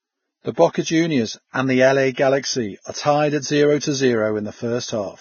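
Throughout the speech, nothing sounds above 6.6 kHz, and the remaining treble is hissy and grainy, with roughened tones. This heavy damage is likely Vorbis compression at a low bitrate, which fits roughly 17 kbps, where coarse residue quantisation turns fine detail into noise.

Pre-echo occurs at 0.54–0.57 s, 2.14–2.17 s, 2.39–2.44 s just before "are tied at zero", and 3.79–3.82 s just after "are tied at zero". Block-spread quantisation noise leaks ahead of sharp attacks as short hiss lasting 32–45 ms, softening each onset.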